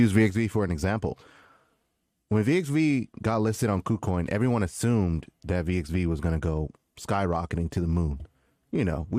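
A speech recording where, from 0.30 s right to the end, one channel drops out: the level falls abruptly by about 6 dB and stays down. That's most likely one side of the stereo pair going dead, so the mono sum only carries half the signal.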